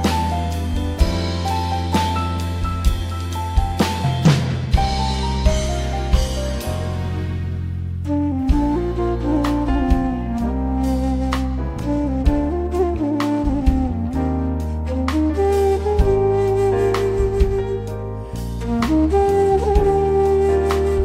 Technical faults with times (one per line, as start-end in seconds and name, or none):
none